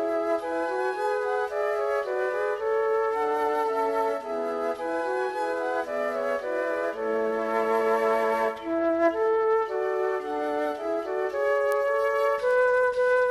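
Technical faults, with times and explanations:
11.72 s and 12.51 s, bit error spike: Two isolated ticks. A flipped bit makes the sample value jump by a power of two, then snap back. The first spans three samples at about -16 dBFS. The second is one sample at about -22 dBFS. Each is a broadband click unrelated to the audio.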